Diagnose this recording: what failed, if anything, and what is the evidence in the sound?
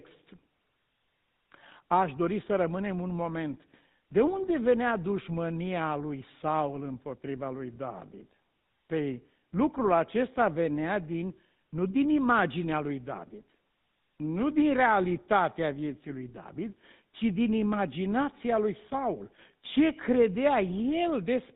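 The codec stage is the culprit here: the whole recording carries the sound of a GSM full-rate codec. The speech is band-limited with nothing above 4 kHz, and there's a plainly audible buzzy, gravelly roughness from start to finish, which fits the old 13 kbit/s full-rate scheme. That grit comes from the way it rebuilds the voice, running a vocal-tract filter off a coarse pulse-train excitation that keeps only one sample in three.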